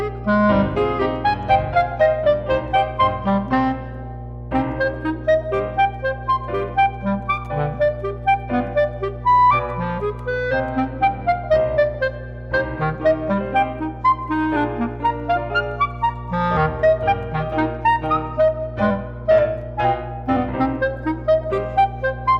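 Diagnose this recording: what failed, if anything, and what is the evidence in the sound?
A ground loop or nearby transformer in the analogue wiring has coupled the power line into the signal, causing mains hum. A steady 60 Hz tone with low harmonics runs from start to finish, loud enough to sit only around 10 dB below the wanted sound.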